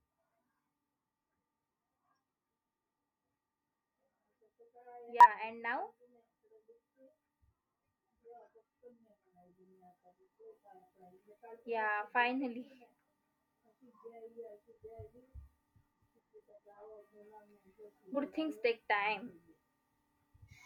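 Speech with compressed frames skipped at 5.21–5.27 s and 18.12–18.17 s: missing or rejected frames make the audio jump ahead about 100 ms, then about 50 ms.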